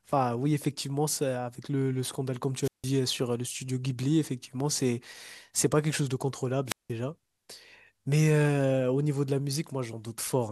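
At 2.62 to 2.84 s and 6.66 to 6.90 s, a wireless microphone squelch dropout cuts the speech: the fading radio signal brings up a burst of hiss, then the receiver mutes for about 163 ms and 178 ms. The waveform shows flat gaps; the spectrogram shows broadband noise, then blank columns.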